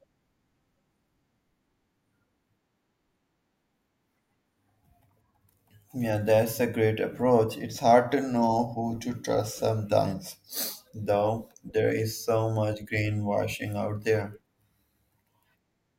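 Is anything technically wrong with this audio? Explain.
No, nothing technically wrong turns up anywhere in this recording.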